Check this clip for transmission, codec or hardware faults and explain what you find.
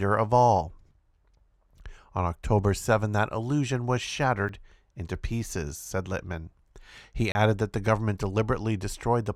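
Two dropouts of the same kind show up, both a block of digital silence in this speech clip. At 4.48 s, right after "that illusion was", about 6 ms of samples go to zero, so it comes across as a quick tick. At 7.32 to 7.35 s, just before "that the government", a 30 ms block drops out, long enough to hear as a small hole. The signal snaps to zero and back with no fade either side.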